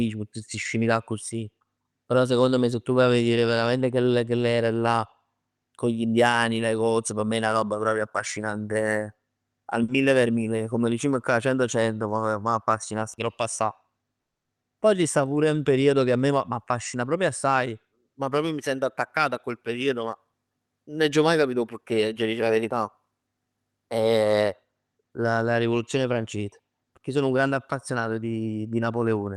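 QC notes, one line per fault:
9.83 to 9.90 s, short stall from a late packet: after "roba proprio affascinante al", the sound is held about 50 ms before "mille per mille"; a smeared, flattened stretch shows on the spectrogram.
13.20 to 13.91 s, 16.31 to 18.00 s and 20.03 to 20.33 s, jitter buffer speed-up: pitch periods are trimmed so the speech runs 5, 7 and 10 percent fast at unchanged pitch, the last between "attaccato a quel periodo" and "nun aggio maj capito"; on the waveform syllables appear compressed, harmonic spacing unchanged.
14.22 to 14.47 s, call audio freeze: a 230 ms silent gap is inserted, likely because packets were held up and the buffer ran dry; a flat waveform and blank spectrogram column.
14.63 s, skip ahead: playback jumps forward, losing roughly 70 ms, with the two sides spliced almost directly; an abrupt discontinuity appears in the waveform and spectral texture.
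14.96 to 15.35 s, jitter buffer slow-down: repeated pitch periods add 46 ms, running the speech at 90 percent speed with same pitch; the spectrogram shows stretched harmonics.
18.09 to 18.15 s, short concealed packet loss: 40 ms of audio was missing and filled by continuing the last sound, heard as a brief smear just before "ma proprio mi sento"; on the spectrogram, blurred, over-regular harmonics.
Throughout, the call path narrows the audio to about 12 kHz, with nothing above that cut-off on the spectrogram.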